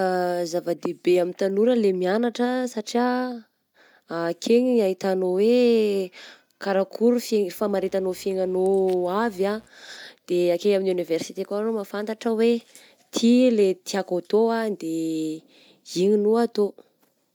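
Mains buzz runs from 7.56 to 9.69 s in this speech recording, a steady raspy buzz sitting roughly 30 dB below the speech. It is built on 60 Hz, with sharp switching spikes twice per mains cycle spreading harmonics up into several kHz.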